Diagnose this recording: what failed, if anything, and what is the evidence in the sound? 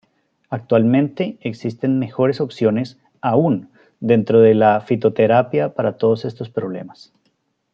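Nothing in the recording points to a failure at any stage of the chain; the signal stays continuous and stable throughout, with nothing audible to diagnose.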